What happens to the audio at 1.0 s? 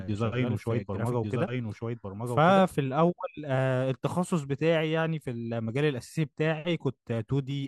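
At 1.0 s the speech is affected by a doubled audio track, already present when the clip begins and ending abruptly at 2.62 s. A second full-band copy of the same speech trails the original by about a second, a few decibels quieter, with no decay or room colouring. It likely comes from the signal being captured twice, once through a slower path, so two out-of-step copies are heard on top of each other.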